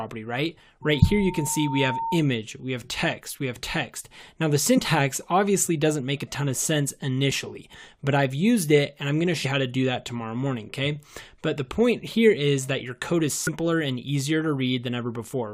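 From 0.82 to 2.24 s there is loudspeaker feedback squeal. A microphone is picking up its own loudspeaker, and the loop gain exceeds one at 910 Hz. That tone swells over about a second into a steady squeal, sitting only a little below the main sound.

Damaged data in a compressed stream follows, at 4.77 to 4.79 s, at 9.44 s and at 13.47 to 13.49 s. Corrupted bytes make the decoder misread frames and lose sync. Each spot is a brief chirp or blip.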